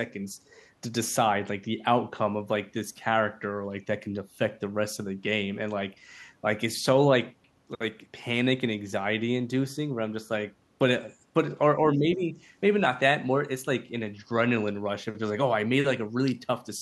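From 11.95 to 12.37 s the speech dips by about 10 dB, with roughly a third of a second affected. This is speech suppressed in double talk, likely an echo canceller mistaking the talker for loudspeaker echo while both sides spoke and turning everything down.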